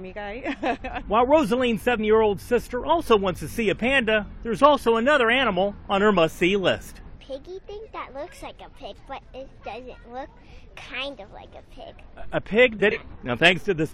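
Two brief glitches break up the audio, from 1.95 to 2.00 s and from 12.91 to 12.98 s. Both come from damaged data in the compressed stream: the decoder loses frame sync on the corrupted bytes and jumps to the next valid header.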